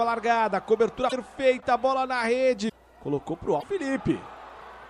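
At 1.09 to 1.13 s, 2.68 to 2.72 s and 3.59 to 3.64 s, the sound jumps forward and a short disturbance takes its place. Each disturbance lasts about 45 ms, close to two MP3 frames of 26 ms. The likely cause is a broken MP3 bit reservoir. Frames were lost, so the next frame looked back for borrowed data and decoded bytes from the wrong frame. The result is a brief skip with a disturbed onset.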